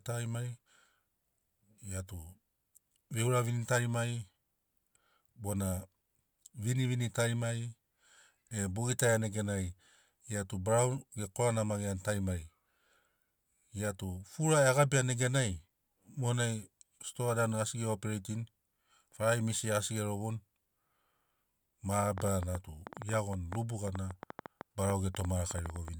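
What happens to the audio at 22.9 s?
At 22.9 s the speech sits inside a train of clicks running from 22.18 to 25.89 s: about 30 same-shaped pops, roughly 8.4 per second at uneven spacing, peaking around 10 dB above the signal. It is likely interference or a faulty connection injecting pulses. Unlike random crackle, the pops are alike and keep coming.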